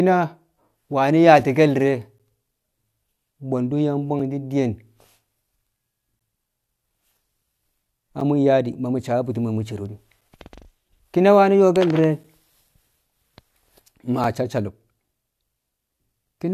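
Short silent holes with hard edges interrupt the speech at 2.18, 4.19, 6.19, 8.20, 10.21 (just after "ma mu̱ cero de̱"), 12.24 and 14.24 s. These are gaps between stream segments. Timestamps on consecutive 2-second segments leave small spaces, and silence of 3 to 13 ms fills them. Unlike a dropout, nothing is lost; time is only added, and the breaks fall at a steady two-second rhythm.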